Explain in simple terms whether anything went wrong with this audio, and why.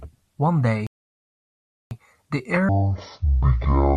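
Two things went wrong. At 0.87 s the speech cuts out for about 1.04 s, until 1.91 s. This is a playback stall, likely the player running short of data.

From 2.69 s to the end, there is a section at the wrong speed. It plays at half speed, so the voice drags and sounds much deeper.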